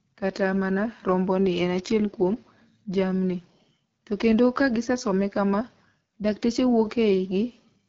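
Speech running through the AMR wideband (HD Voice) codec for the whole clip, with nothing above 7.3 kHz and a plainly rough, raspy edge on the voice. That roughness points to one of AMR-WB's lowest rates, around 8.85 kbit/s, where the pulse-driven speech model gets too few bits.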